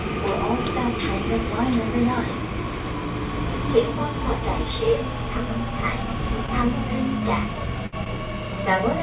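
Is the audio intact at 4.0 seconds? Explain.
Yes, the sound at 4.0 seconds is intact, with no dropout, glitch or other fault there, only the narrow band of a telephone-style call path with nothing above 4 kHz.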